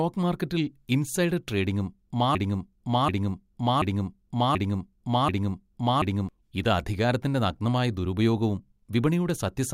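From 2.35 s to 6.29 s the speech sticks on a single fragment about 0.73 s long, which plays five times back to back with no change between passes, and then normal speech resumes. This broken-record loop most likely comes from a stall in the player, encoder or stream, which kept resending the last piece it held. Whatever should have been heard during those four seconds is missing.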